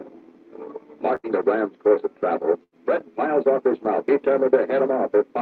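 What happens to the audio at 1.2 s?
A burst of packet loss from 1.15 to 1.26 s left the receiver filling 81 ms by holding and fading the last sound, before resuming 80 ms further on.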